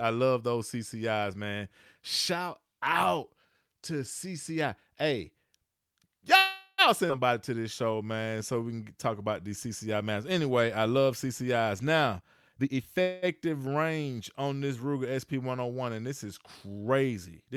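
At 6.37 to 6.81 s there is a call audio freeze. The last sound stretches into a fading buzz, with a brief silence, for about 0.4 s. Delayed packets likely emptied the jitter buffer. Speech then resumes without loss. At 7.08 s the audio skips ahead. About a tenth of a second is dropped and the two sides join almost directly. From 7.56 to 8.60 s a jitter buffer slow-down runs speech at 90% speed. Repeated pitch periods add 116 ms, drawing sounds out at the same pitch. From 12.19 to 12.98 s a jitter buffer speed-up runs at 131% speed. Roughly 0.3 s of short pieces is cut, so speech sounds hurried. At 13.02 to 13.25 s a second call audio freeze fills 208 ms with a continued buzz and no silence. Speech then picks up where it stopped.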